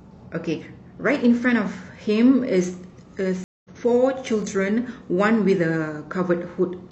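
From 0.92 s to about 6.1 s, a click recurs every 1.72 s, about four times. These are clock drift buffer slips. The likely cause is two clocks differing by around 100 ppm, so a buffer fills or empties and drops or repeats a few samples.

At 3.44 s there is a stream reconnect. The sound cuts out for 205 ms, then resumes at 3.70 s roughly 150 ms further on. The link dropped, and a fresh decoder picked up mid-stream, skipping material.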